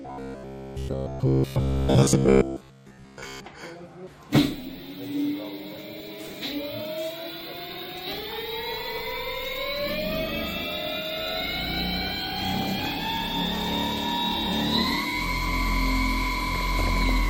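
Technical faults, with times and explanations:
0.02–3.45 s, robotic sound from repeated short buffers: The sound becomes a rigid metallic buzz pitched at 66.7 Hz, only loosely tracking the underlying audio. Likely the output is repeating a 15 ms chunk while fresh data is late, and the repeats replace most of the real signal. A spectrogram shows evenly spaced harmonic lines every 66.7 Hz; the waveform shows a periodic pattern recurring every 15 ms.
5.59–6.53 s, 7.38–8.38 s, 12.50–13.01 s and 16.55–17.09 s, DAB burbling: Burbling overlays the programme in four bursts. Bit errors, a fraction of a percent, slip past error correction into the MP2 data, corrupting samples and scale factors so individual sub-bands jump in level for up to a frame. The span of each burst points to around 22 to 42 affected frames. A spectrogram shows isolated bright rectangular blocks in single frequency bands; the waveform shows brief irregular level bumps.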